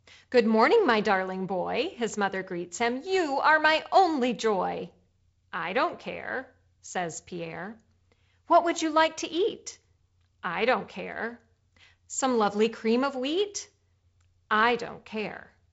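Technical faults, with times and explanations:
Technical faults: none.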